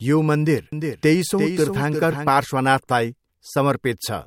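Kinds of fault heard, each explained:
Doubled audio track: a slower second capture path likely mixed the speech in again, so a copy about 5 dB quieter trails roughly 400 ms behind.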